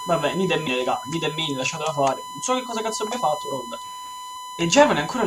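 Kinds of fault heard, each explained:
USB whine: Current drawn by the USB bus in regular 1 ms frames leaks into the audio path as a steady 1 kHz tone about 10 dB below the signal for the whole clip. On a spectrogram it is a sharp, unbroken horizontal line at 1 kHz.
Compressed frames skipped: At 0.66 s and 4.35 s, whole blocks of coded audio go unplayed, so the sound jumps ahead by roughly 150 ms, which fits about seven 23.2 ms frames. Each join is a brief smeared blip. The waveform shows a sudden content discontinuity without a sharp spike.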